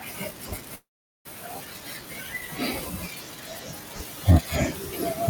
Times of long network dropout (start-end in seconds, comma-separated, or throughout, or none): 0.75-1.27